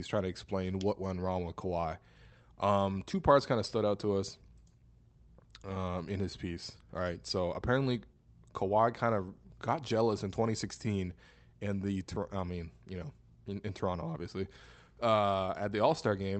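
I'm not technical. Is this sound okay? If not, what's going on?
No. There is clock drift between sender and receiver. The sending device's audio clock runs about 3% slow compared with the receiving device, so the receiving end keeps running slightly short of sound and has to fill the gaps to stay in step.

That filling shows up as repeated timing corrections from 0.72 s, just after "trying to", until 16.36 s. The receiver repeats small slices of audio at uneven intervals, adding about 0.4 seconds overall. If heard at all, these come across as faint hiccups and a slightly dragging, unsteady pace.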